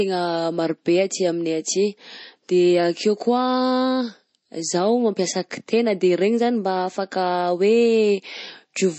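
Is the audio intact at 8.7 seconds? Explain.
No. At 8.7 seconds, as across the whole speech clip, the sound is band-limited with nothing above 8.3 kHz, and a watery, swirling texture is plainly audible. This is likely MP3 compression at a bitrate near 32 kbps: the encoder cuts the treble and drops weak frequency lines.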